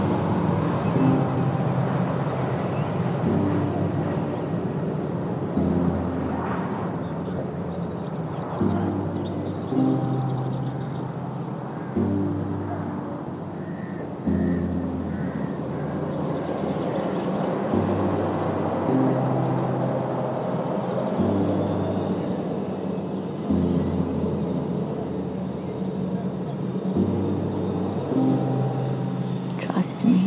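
At 8.02 to 8.13 s the sound jumps forward with no gap, roughly 0.4 s missing and the edges butted together: a skip ahead, where queued audio was discarded to catch up.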